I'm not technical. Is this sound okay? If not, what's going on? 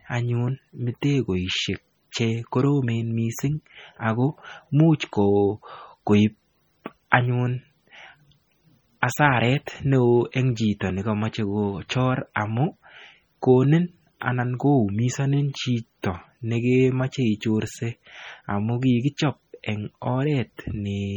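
No. Throughout the speech there is a watery, swirling quality, with a metallic chirp on s sounds, and the starts of sounds are smeared rather than crisp. This is likely heavy MP3 compression. To save space, the encoder gave too little data to fine detail, so quieter parts of the sound drop in and out from one instant to the next. That flicker is what you hear as the swirl and the chirping.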